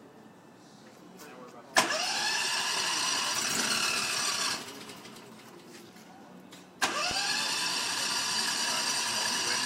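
Two loud pops land on the sound: a short one from 4.54 to 4.56 s, peaking roughly 5 dB above the surrounding audio, and a louder one from 7.11 to 7.13 s, around 10 dB up. Each is a single brief thump riding on top while the audio continues underneath. The likely cause is a sudden voltage step from a switch, static discharge or driver glitch, with the downstream circuitry rounding it into a pop.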